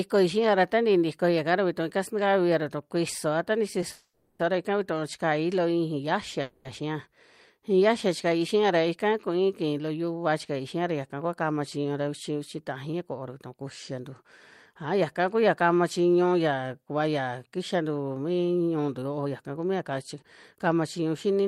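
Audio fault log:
3.92–4.41 s and 6.42–6.67 s, call audio freeze: the speech halts after "ra kuisoa ta ni" and again at 6.42 s. The likely cause is packets held up in transit, which left the jitter buffer empty. The receiver stretches the last sound into a fading buzz for about 470 ms and then 230 ms, with a 30 ms silence inside the first gap. When the packets arrive, speech resumes with "ra ika" where it stopped, so nothing is lost, but each stall adds its length to the delay.
11.84–14.24 s, 14.74–15.51 s and 16.55–21.35 s, jitter buffer speed-up: starting after "ra yaka kua kama", the receiver held more audio than it aims for and trimmed the excess by repeatedly cutting out short pitch-period slices. The speech runs 8%, 5% and then 9% fast at unchanged pitch, so it sounds hurried. In total roughly 200 ms, 40 ms and 400 ms are removed, and the middle run ends before "kama chiñu".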